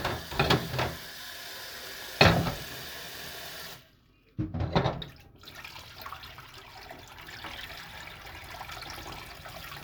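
No technical faults are audible.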